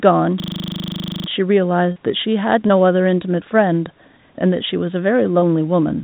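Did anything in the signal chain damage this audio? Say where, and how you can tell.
Yes. At the driver or buffer stage there is a system hang loop from 0.4 to 1.28 s. The same 40 ms fragment repeats exactly 22 times, a rigid 25 Hz stutter. That fits a stalled host while the audio hardware kept replaying one 40 ms ring buffer.

At the network stage there is short concealed packet loss at 1.92 to 1.98 s (about 40 ms missing), 2.68 to 2.72 s and 5.40 to 5.44 s (about 20 ms each). Each gap is a brief smear where the receiver extended the preceding sound, then blended back into the narrowband G.711 audio.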